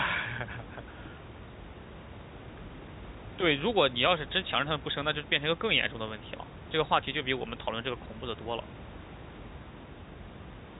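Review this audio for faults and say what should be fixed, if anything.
Nothing here needs fixing.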